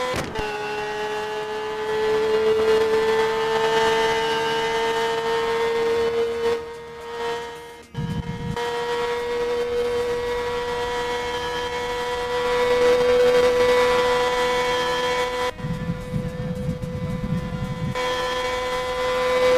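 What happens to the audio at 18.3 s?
Nothing goes wrong at 18.3 s; the audio plays through that moment intact, with no dropout, click or distortion.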